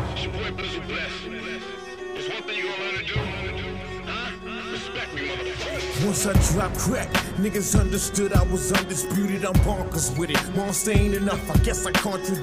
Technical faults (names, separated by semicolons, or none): chunks out of order